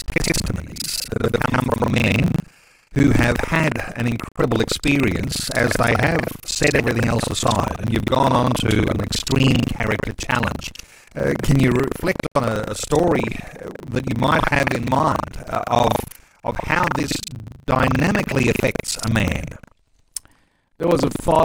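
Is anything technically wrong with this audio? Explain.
Yes. Two faults are audible in this speech.

Buffer tearing runs throughout. The writing program and the playback hardware have slipped out of step. Part of each buffer replays audio from about a tenth of a second earlier. This gives a robotic 25 Hz buzz, heard only while there is speech.

Digital broadcast dropout occurs twice, from 4.29 to 4.42 s and from 12.26 to 12.41 s. The receiver muted after losing good frames. Each time the sound fades out in about 3 ms and leaves a hole. About 85 ms of audio is missing, which fits two lost frames.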